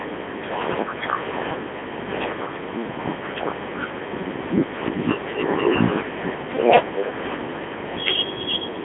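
Speech runs through a Codec 2 vocoder for its whole length, band-limited to roughly 200 Hz to 3.5 kHz with nothing above 3.7 kHz. The voice is rebuilt from sine waves driven by pitch, voicing and an envelope, so it sounds robotic and buzzy, which fits the 3.2 kbit/s mode. That buzz, not the warbly smearing of a starved waveform codec or the clean narrowing of a plain telephone line, is what marks heavy vocoder damage.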